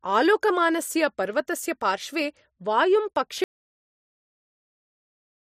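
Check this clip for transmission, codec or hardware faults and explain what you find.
There is one fault, an audio dropout to silence, from 3.44 s to the end. The input was likely lost while recording continued, so the speech cuts off mid-flow into silence with no room tone.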